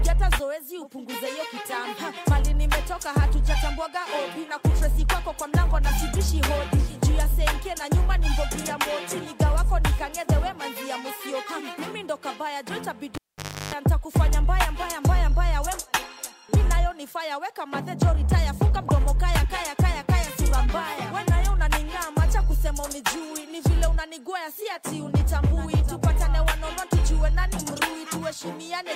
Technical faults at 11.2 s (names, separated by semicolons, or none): none